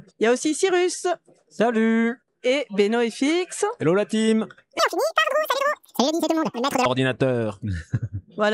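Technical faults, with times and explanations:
4.79 to 6.85 s, wrong sample rate: the samples are read out at twice the speed they were captured at, with no conversion, which fits 24 kHz material played at 48 kHz. The sound runs 2.0 times faster and jumps a full octave (12 semitones) higher.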